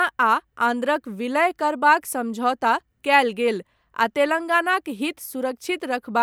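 No audible faults anywhere in the recording; nothing to flag.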